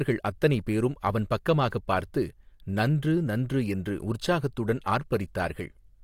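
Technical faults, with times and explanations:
4.83–4.86 s, pre-echo: a short hiss runs about 26 ms ahead of a sharp speech onset. Codec block noise leaks backward, unlike reverb, which trails after the sound.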